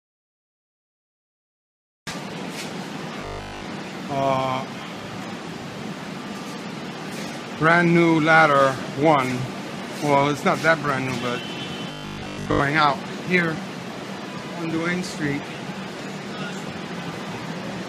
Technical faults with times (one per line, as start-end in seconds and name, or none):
3.21-3.65 robotic sound from repeated short buffers
11.92-12.60 robotic sound from repeated short buffers